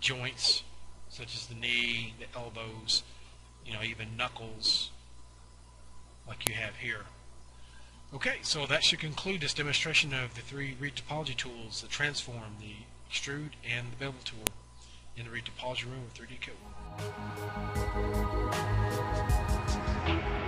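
At 6.47 s and again at 14.47 s a sharp, loud click cuts through the sound, a file header played as audio. The clip was assembled from pieces 8.0 s long without stripping each piece's WAV header, so those few dozen bytes are read as sample values. On a waveform each appears as a single isolated spike; on a spectrogram, a thin vertical stripe spanning all frequencies, regardless of the surrounding signal.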